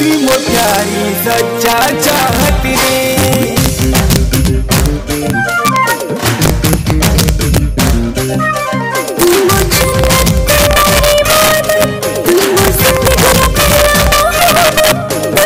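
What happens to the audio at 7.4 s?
At 7.4 s the audio is in the middle of integer overflow that runs through the whole clip. The signal is driven about 2 dB past the integer limit, so the loudest peaks, around one percent of samples, wrap to the opposite sign, producing sharp, violent cracks. On a waveform those peaks jump from one rail to the other, and a spectrogram shows thin broadband vertical streaks.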